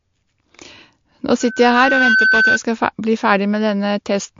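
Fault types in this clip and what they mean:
MP3 compression: Throughout the speech, codec damage is plainly audible and nothing is present above 7.2 kHz, so the top of the spectrum is simply missing. The likely cause is lossy MP3 encoding at a low bitrate, which fits something around 48 kbps. With so few bits, the encoder discards frequency detail it judges less important and applies a fixed treble cut-off, leaving the audio dull and audibly processed.
Loudspeaker feedback squeal: From 1.40 s to 2.59 s a single steady tone at 1.5 kHz rises over roughly 0.7 s into a squeal that ends up around 5 dB louder than the speech. It happens when a microphone picks up the loudspeaker it is driving and, at that one frequency, the loop gain exceeds unity, so the tone keeps reinforcing itself until the loop is broken or the system limits it.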